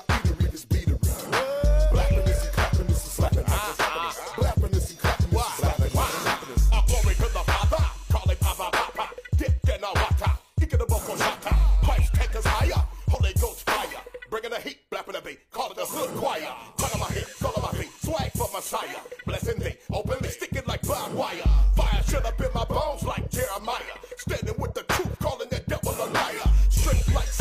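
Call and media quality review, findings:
Overlap between stream segments: short skips at 1.26–1.29 s, 7.21 s, 9.18–9.20 s and 13.15 s. Packager or player trimming overlapping timestamps on the 2 s segments, cutting 15–30 ms of real audio, so the waveform jumps at the boundaries.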